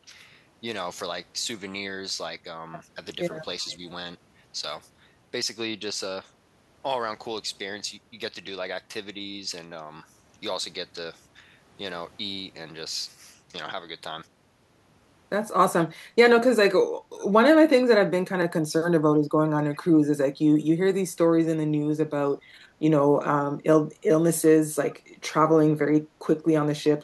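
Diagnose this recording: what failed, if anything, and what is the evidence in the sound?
Echo leak in call processing: three brief scraps at 3.70–3.76 s, 19.73–19.77 s and 24.90–24.95 s carry a faint copy of the speech 373 ms late, roughly 30 to 35 dB down. On a spectrogram they appear as faint ghosts of earlier harmonics. Likely cause: an incompletely cancelled loudspeaker pickup.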